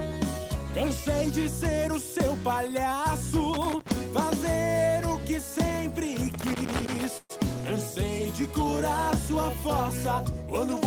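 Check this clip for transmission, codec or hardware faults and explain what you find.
There are two hardware faults and one transmission fault. A loose connector crackle shows up at 3.53–3.91 s and again at 6.34–7.05 s: a worn contact chopping the signal, giving irregular scratchy bursts. Right after, at 7.17–7.31 s, there's a call audio freeze. The last sound stretches into a fading buzz or hiss for about 120 ms, then about 20 ms of silence, before the audio resumes where it left off with nothing lost, likely because delayed packets ran the jitter buffer dry.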